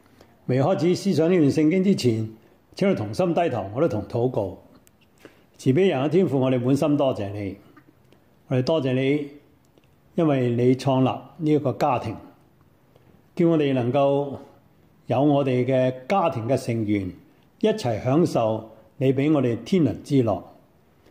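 The recording has no technical faults to report.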